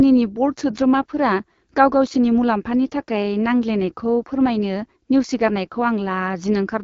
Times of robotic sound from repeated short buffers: none

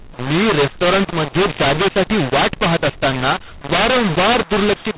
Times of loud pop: none

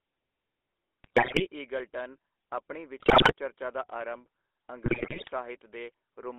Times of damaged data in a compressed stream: none

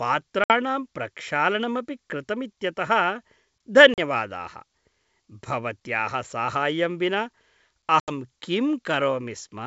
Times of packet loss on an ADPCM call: 0.44-0.52, 3.94-3.99, 8.00-8.10

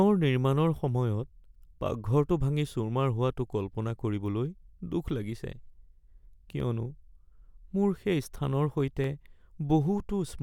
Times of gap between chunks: none

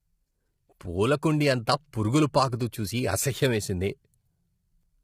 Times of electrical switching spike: none

